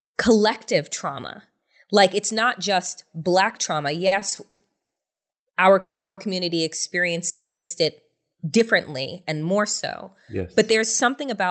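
A speech clip carried over a call path, with the highs cut near 8 kHz. Repeated stalls (stutter) run from 4.07 to 5.31 s, right after "not just black trauma". Seven gaps are filled by stretching the last sound, the longest 170 ms, 450 ms in all, about a third of that span. Packets arrived late, so the jitter buffer kept running dry. Nothing is lost, but the speech drags. Two call audio freezes follow. The first, from 5.80 to 6.20 s, adds about 370 ms. The second, from 7.29 to 7.73 s, adds about 410 ms, just before "it differently and". In each, the last sound is held and fades, then 260 to 300 ms of near silence follows before the speech resumes where it stopped. The likely cause is packets held up in transit, emptying the buffer. At 10.33 to 11.44 s there is a jitter buffer speed-up. The speech runs about 6% fast at unchanged pitch and sounds hurried. The buffer had built up extra delay and trimmed about 70 ms in short pitch-period slices to catch up.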